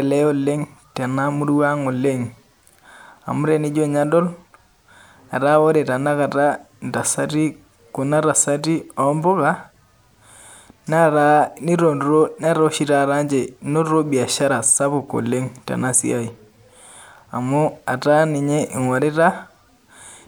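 No technical faults are audible.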